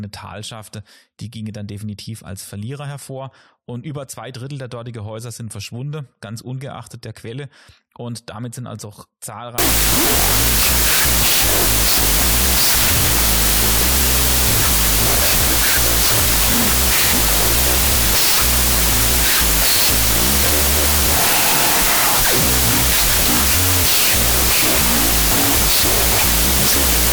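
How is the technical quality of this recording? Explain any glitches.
The first stretch of this speech is clean, but after "damit sind also auch", at about 9.58 s, it breaks down and stays broken to the end. That's a wrong sample width fault. The bytes are being read at a different size than they were written, which fits 32-bit float data read as 16-bit integers. Most values end up stitched from mismatched bytes, so you get loud noise with the real signal buried underneath, running at half speed and an octave low.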